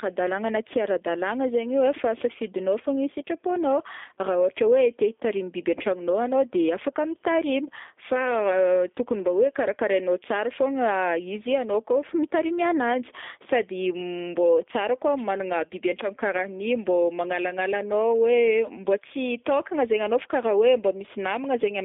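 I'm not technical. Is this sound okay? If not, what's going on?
No. From start to finish the speech sounds thin, boxed-in and a little rough and robotic, like a phone call over an internet line. That's the G.729 codec, a phone-system format that shrinks speech by rebuilding it from a rough model of the voice instead of sending the sound itself. Everything above about 3.6 kHz is gone, as is the deepest bass below 250 Hz, so the sound loses its crispness and fullness, and the rebuilding leaves a clearly audible artificial texture.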